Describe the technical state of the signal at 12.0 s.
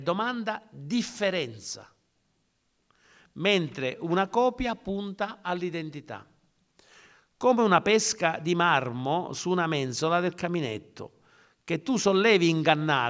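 At 12.0 s the speech signal is intact, with no audible fault at that moment.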